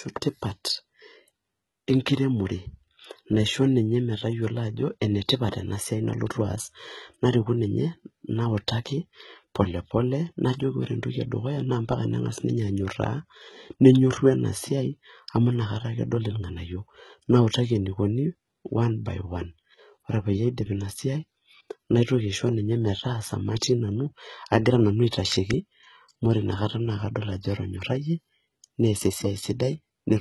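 Throughout the speech, the treble sounds synthetic: sibilants come out gritty and lispy, with nothing above 11.8 kHz. This is likely HE-AAC compression at a very low bitrate, around 16 kbps, where the upper band is rebuilt from copied lower bands and its harmonics no longer align.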